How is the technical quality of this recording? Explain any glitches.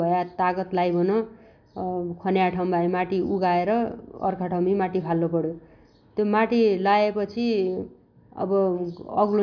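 No technical glitches are audible in this recording.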